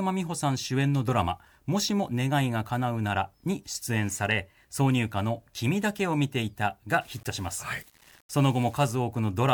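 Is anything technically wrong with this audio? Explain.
Yes. From 7.01 to 8.95 s the speech turns grainy, with distortion tracking the signal, likely low bit depth without dither: roughly 7-bit rounding leaving error only about 30 dB down.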